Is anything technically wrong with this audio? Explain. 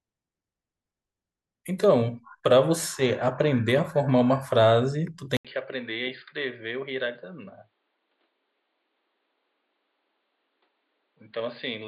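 Yes. At 5.37 s the sound drops out for 80 ms. It returns duller and quieter until the end. The input likely switched to a poorer device. Nothing above 4.8 kHz remains. The level falls about 10 dB, with new background noise about 40 dB down.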